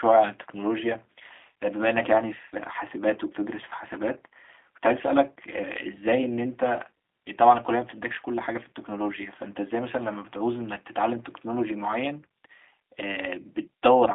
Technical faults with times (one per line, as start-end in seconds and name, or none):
0.00-14.14 G.729 codec